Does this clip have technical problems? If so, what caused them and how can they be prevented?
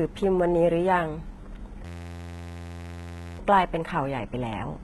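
Yes. Throughout, the treble sounds gritty and lispy, with nothing above 11.8 kHz. This is likely heavy HE-AAC compression, whose rebuilt upper band fits a very low bitrate of around 16 kbps. Encode at a higher bitrate, or use plain AAC or Opus, to prevent this.

From 1.85 to 3.39 s, a steady buzz at 86.1 Hz replaces about a second and a half of audio. This is a system hang loop: an 11.61 ms piece, which fits a 512-sample buffer, repeats while the computer is frozen. Stopping background load and updating the audio driver helps prevent these hangs.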